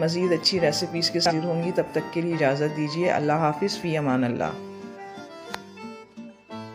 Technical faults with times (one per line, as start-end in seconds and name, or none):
1.26-1.32 damaged data in a compressed stream
5.16-5.21 damaged data in a compressed stream